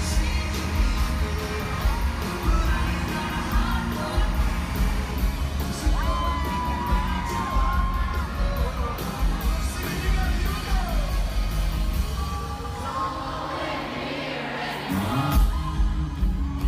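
From the start to 5.11 s, a chirping warble sits roughly 15 dB under the sound. This is timecode bleed: linear timecode from a nearby track or cable has leaked into the audio path, and its square-wave code flips between tones around 1 and 2 kHz. Unlike a steady whistle or hum, it jumps between two pitches in a regular rhythm that fits 24-frame code, then stops.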